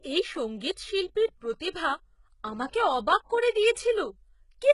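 Speech carries heavy HE-AAC compression damage from start to finish. Sibilants sound gritty and lispy, and the upper band has a metallic sheen because its harmonics don't line up with those below. That is the mark of spectral band replication, where treble is rebuilt by copying lower bands upward, and is likely from HE-AAC at a rate around 12 kbps. A spectrogram would show blocky, repeated-looking texture in the treble and nothing above 11.1 kHz.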